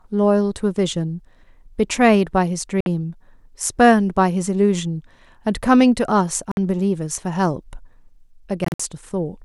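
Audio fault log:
2.81–2.86 s and 6.51–6.57 s: Bluetooth dropout, each a silence of 56 ms with a likely cause of late wireless packets. The speech resumes further along rather than continuing from where it stopped, unlike a stall.
8.65–8.80 s: Bluetooth dropout, silent gaps totalling 112 ms scattered over about 150 ms, the longest 56 ms, with a likely cause of repeated packet loss. Each return skips ahead instead of blurring like a codec glitch.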